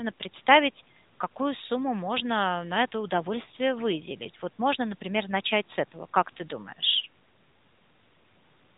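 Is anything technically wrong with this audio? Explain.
Yes. Throughout the speech, AMR narrowband mobile codec coding is plainly audible, with nothing above 3.8 kHz. The codec samples at 8 kHz and rebuilds the voice from a vocal-tract model driven by a few pulses every 5 ms, giving a buzzy, synthetic quality that fits the 10.2 kbps mode.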